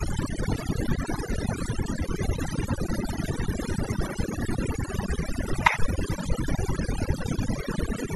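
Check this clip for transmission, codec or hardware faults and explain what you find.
One fault is present, and it comes from processing rather than transmission or hardware: overdone noise removal, running throughout the speech. The background drops and is scattered with twinkling specks. A noise reduction stage set far too aggressively is pulling individual frequency bands down or shutting them off whenever their level sits close to its noise estimate. The quieter parts of the voice fall below that threshold and are removed along with the noise, leaving isolated bands flickering on and off.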